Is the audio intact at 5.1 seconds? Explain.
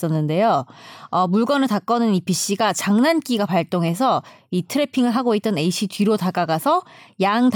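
Yes, at 5.1 seconds the speech runs intact, with no dropout, click, glitch or other fault.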